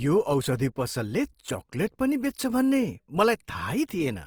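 A speech clip with plainly audible coding damage from start to finish: the speech has a rough, grainy, noisy texture rather than swirly holes, and the band still reaches about 20.3 kHz. This is likely Opus compression in CELT mode, keeping each band's energy but filling starved bands with folded or noise content, at a rate that fits about 24 kbps.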